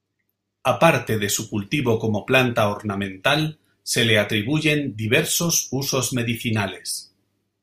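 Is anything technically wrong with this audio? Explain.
No technical faults are audible.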